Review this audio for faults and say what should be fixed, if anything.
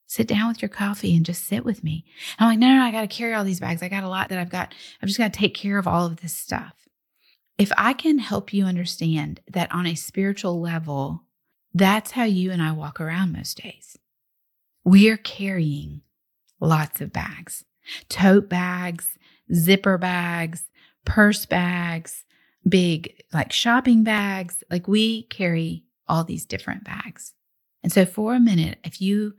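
Audio missing between chunks at 4.27 s: the recorder likely lost a short piece while closing one chunk and opening the next, so the sound jumps forward by roughly 40 ms with no gap. To prevent it, keep capture running across chunk boundaries with overlapping or double-buffered chunks.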